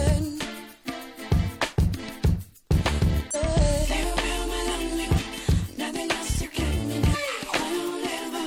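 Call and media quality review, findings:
Damaged data in a compressed stream: short glitches at 0.36–0.41 s, 3.31–3.36 s, 5.14–5.20 s and 7.10–7.16 s, each about 50 ms. Probable component: decoder input, with corrupted or missing bytes in the stream. Mechanism: bad frames misread or dropped, decoder loses sync and hunts for the next valid frame header, so the sound glitches briefly before decoding resumes.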